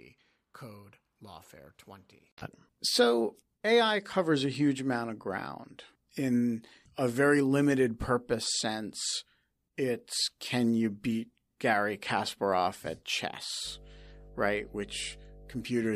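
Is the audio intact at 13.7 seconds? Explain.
No. At 13.7 seconds there's mains hum, which comes in at 13.63 s and runs until 15.67 s. It's a steady low drone at 50 Hz sitting under the speech, roughly 20 dB below it. That's the power line leaking into the signal path, through a ground loop or a transformer sitting close to the cabling, and it shows up as that constant low tone.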